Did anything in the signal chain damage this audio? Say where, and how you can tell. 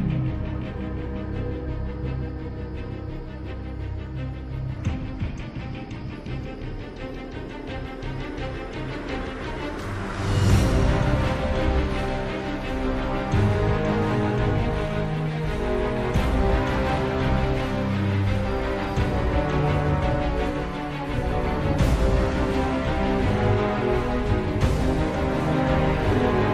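No, nothing stood out on listening that would point to damage at any stage of the signal chain.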